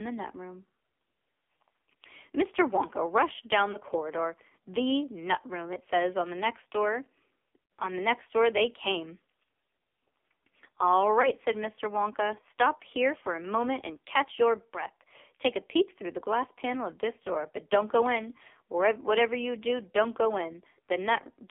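Throughout, the speech carries heavy AMR narrowband mobile codec damage. The band runs only from 250 Hz to 3.6 kHz, and the voice sounds buzzy and synthetic, which points to a low rate near 5.9 kbps. Unlike plain band-limiting, the pulse-driven vocal-tract model leaves this rasp in the voice itself.

Lost AMR speech frames occur at 3.72 to 3.79 s, just before "corridor the nut room"; at 7.64 to 7.70 s, right after "on the next door"; and at 11.22 to 11.31 s. At each of these points the decoder repeats the last pitch and vocal-tract settings at falling gain. The first and third are brief warbling dips. The second, about 60 ms long, is drawn out and fades. Unlike a packet dropout, there is no hard silence or click.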